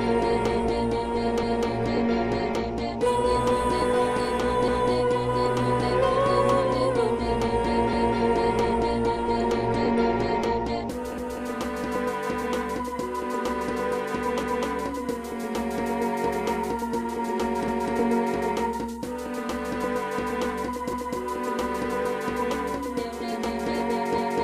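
The audio was cut into overlapping chunks, about 3 s long, each starting a quarter second before the previous one ended. The overlap was never trimmed, so at each join about 250 ms of sound plays twice. This happens at 1.43, 4.68, 7.93, 11.18, 17.68, 20.93 and 24.18 s, mostly about 3.25 s apart, with a longer 6.5 s gap between 11.18 and 17.68 s. Each join is heard as a short stutter or click.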